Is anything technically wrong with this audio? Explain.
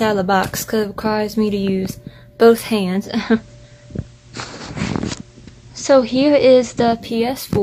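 Yes. From 2.79 s to 7.29 s the sound shows a digital radio blending to analogue: the receiver lost its digital stream and cross-faded over about 0.46 s to the FM broadcast of the same station, then back again. During that stretch a steady hiss sits roughly 35 dB below the signal, with no change in level. The smooth cross-fade and the arrival of hiss set it apart from a codec simply narrowing its bandwidth.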